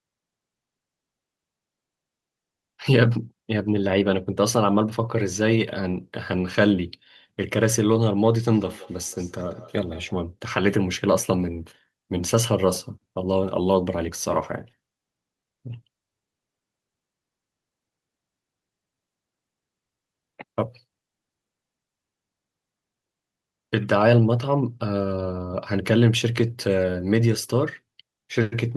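Feedback echo between two devices runs from 8.53 to 10.18 s: a second device in the room replays the call, and the other microphone recaptures it, beyond its own echo canceller's reach. Sound returns roughly every fifth of a second, peaking about 22 dB below the speech.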